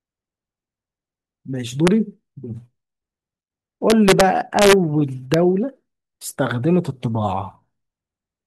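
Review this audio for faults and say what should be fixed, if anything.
Integer overflow at 1.87 s, 3.90 to 4.21 s, 4.59 to 4.73 s and 5.34 s: speech peaks exceeding full scale by up to about 1 dB wrap to the opposite sign, producing harsh cracks. Use saturating arithmetic or a limiter before integer conversion so that peaks clamp instead of wrapping.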